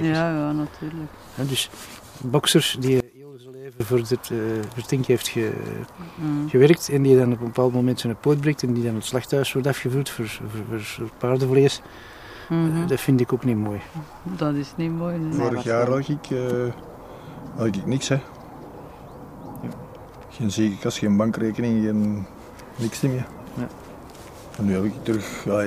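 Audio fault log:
3.00 to 3.80 s, one channel inverted: for about 0.8 s the sound falls by about 24 dB, the centred material almost gone while a faint residue remains. The likely cause is one channel flipping polarity, so the shared content cancels in the mono sum and only the difference between channels survives. A dropout or gain dip would leave silence or a quieter but full-bodied copy. Here the lost centre marks cancellation.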